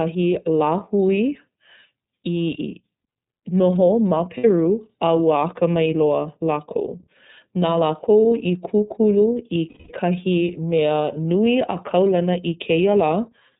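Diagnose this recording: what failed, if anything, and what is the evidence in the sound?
The failure is in the codec stage. The whole speech clip passes through the iLBC codec, and the damage is plainly audible. Nothing above 4 kHz survives, so the speech sounds narrowband and muffled. Voiced sounds have a rough, slightly synthetic edge. This comes from coding each frame's excitation on its own rather than predicting it from the previous frame. The character fits iLBC's 13.33 kbps mode with 30 ms frames.

The second failure is in the network stage, where lost iLBC frames cause two gaps. The first runs from 4.38 to 4.45 s. It is a short, held buzzy vowel, about 60 ms long, which fits two 30 ms frames. The second runs from 9.69 to 9.92 s, about 210 ms, which fits roughly seven frames. It is a longer sustained buzz that fades. At each gap the decoder repeats the last pitch cycle mixed with noise. 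Because each frame stands alone, speech recovers immediately afterwards.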